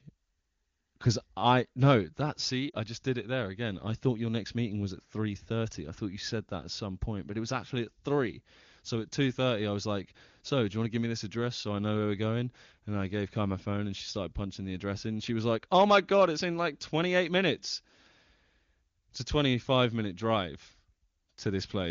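Lost AMR speech frames at 2.70 to 2.75 s, between "I no that see" and "just did it there": roughly 40 ms, which fits two dropped 20 ms frames, failed their checks, so the HD Voice decoder repeated its last good pitch and vocal-tract settings at falling gain, dropping to near silence within the two frames before the voice came back weak or rough for a moment.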